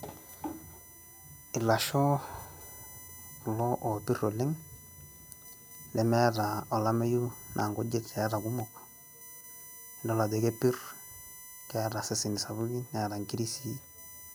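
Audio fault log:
throughout: USB whine. A fixed-pitch tone built on 1 kHz runs under the speech, with its strongest component at the 12 kHz harmonic, about 20 dB below the signal. This is current drawn in 1 ms bus frames leaking into the audio through shared power or ground.
0.61 to 13.61 s: periodic USB or driver dropouts. Every 1.0 s, around a millisecond of audio is replaced by silence, producing evenly spaced ticks in the speech. The regular interval points to a background task periodically stalling the USB transfer or audio driver.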